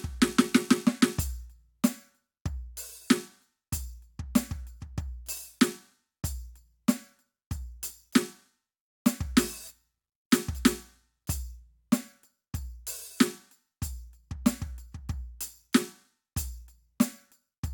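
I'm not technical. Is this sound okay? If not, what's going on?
Yes, this music is in good technical shape, with nothing in the signal that needs fixing.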